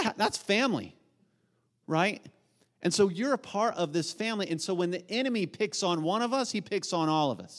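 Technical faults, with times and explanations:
No technical faults can be heard in this speech.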